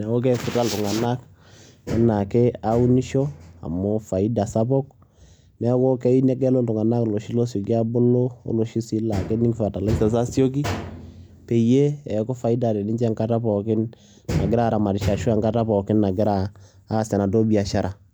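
No technical faults can be heard anywhere in the speech. There is nothing in the audio that calls for comment.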